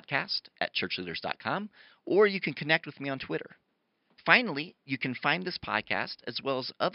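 No technical faults are audible in the speech; the only thing under it is the room's own background noise, sitting about 47 dB down.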